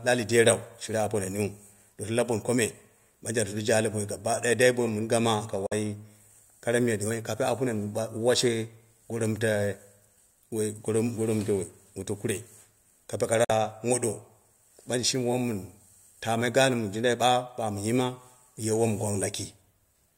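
At 5.66 to 5.73 s and again at 13.44 to 13.51 s the speech cuts to abrupt silence for about 46 ms, which fits two lost packets, likely a Bluetooth dropout. Unlike a stall, speech resumes further along, as if it kept playing.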